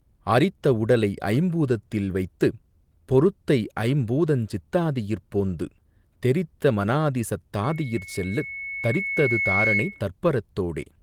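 At 7.63 s, after "தாதியிற் போந்து தெரித்த மனாதிசத்", loudspeaker feedback squeal: the microphone catches its own loudspeaker, loop gain exceeds one at 2.2 kHz, and a tone swells over about two seconds to above the speech until 10.08 s.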